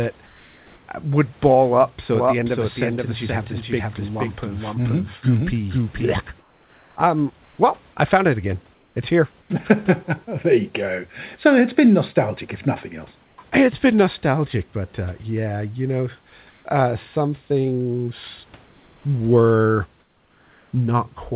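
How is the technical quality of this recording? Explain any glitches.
Two kinds of glitch stand out: the background keeps getting swapped for a flat synthetic hiss, and for a few seconds the whole sound plays twice. The band tops out at 4 kHz, which fits a G.711 A-law call path, and there's real room noise about 36 dB under the speech.

Comfort noise in place of the background shows up at 0.26–0.88 s (just before "would ball up"), 6.4–7.58 s (just before "well I found it"), 8.74–9.5 s, 13.24–13.38 s (right after "nostalgic if nothing else"), 16.5–16.64 s, 18.66–19.04 s and 20.0–20.72 s. In each gap the textured room sound drops out and a smooth, featureless noise takes over, in most of them about 2 to 3 dB quieter. The likely cause is discontinuous transmission: the sender goes quiet when it hears no speech, and the receiver fills in generated noise.

The doubled audio track runs from 2.15 to 6.13 s. 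A second full-band copy trails the original by about half a second, a few dB quieter. It has no reverb tail or room colour, so it reads as a dry repeat rather than an echo, and it switches in and out abruptly at those edges. That's likely a second capture path or an edit holding two offset copies of the same audio.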